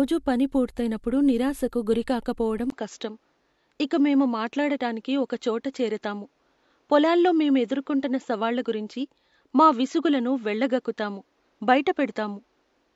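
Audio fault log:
2.70–12.95 s, input switched to a poorer device: after "పని పూర్తయినప్పుడు నిరాశకు గురికాకపోవడం", a 20 ms gap, then duller speech with nothing above 7.6 kHz and faint new background noise, likely from a narrower-band microphone.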